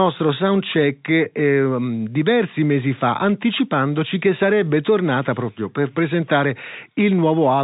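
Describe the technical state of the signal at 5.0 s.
At 5.0 s the speech is intact, carried over ordinary G.711 telephone coding with its usual narrow band that stops near 3.8 kHz.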